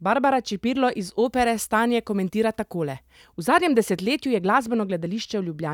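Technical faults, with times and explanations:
1.26 to 3.33 s, pre-emphasis left on: across this stretch of speech the treble boost applied before recording was never undone by the matching de-emphasis, which fits the CD 50/15 µs curve. Content around 10 kHz sits about 8 dB above the 1 kHz level, so the voice turns thin, bright and hissy on sibilants. On a spectrogram the upper bands look brighter, with a shelf-like lift that begins and ends sharply at the range edges; the waveform shows spikier detail.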